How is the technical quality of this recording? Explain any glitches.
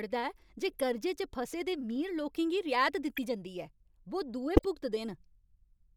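The recording has three short glitches in the speech, each a corrupt frame decoded. At 0.71 to 0.81 s there is a faint chirpy blip, around -30 dBFS. At 3.15 to 3.18 s a brief, louder squeak rises to around -20 dBFS. At 4.57 to 4.65 s, right after "बो दुए", the loudest burst peaks near -10 dBFS. In each case a few compressed frames arrived with damaged bits, and the decoder played them anyway. Misread gains and codes put energy at the wrong frequencies for the length of those frames.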